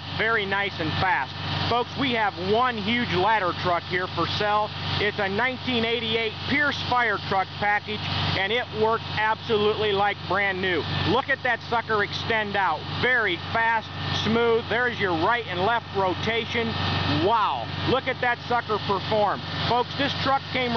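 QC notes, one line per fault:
Nothing to flag here; I listened all the way through and didn't catch a single problem worth a note.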